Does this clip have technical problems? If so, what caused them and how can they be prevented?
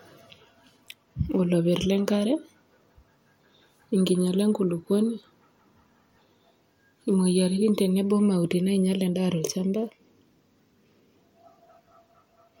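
No, the speech signal shows no technical faults at any point, so there is nothing here that needs a cause or a preventive fix.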